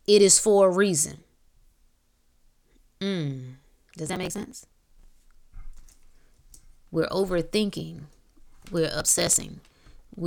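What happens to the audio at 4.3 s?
Processor overload crackle covers 4.3 s, running from 4.06 to 5.10 s. The processor falls behind and misses one buffer deadline after another, and each missed buffer is simply skipped, leaving a tiny hard-edged gap in the speech. The gaps fit buffers of around 5 ms, with about 100 of them dropped over that second. Together they are heard as a gritty, tearing crackle over the speech that stops once the load eases.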